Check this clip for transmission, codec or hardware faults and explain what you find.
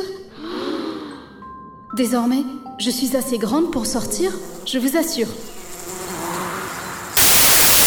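One fault is present, in the final stretch. From 7.17 s to the end, the audio turns into broadband noise. These are samples built from the wrong bytes: each sample's bytes are combined incorrectly, through a one-byte offset, a swapped byte order or a wrong alignment, so fast-changing low bits dominate each value.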